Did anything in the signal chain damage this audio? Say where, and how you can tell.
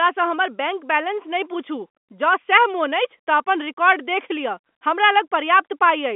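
No, nothing in the signal chain stood out as damaging this speech when I listened to it.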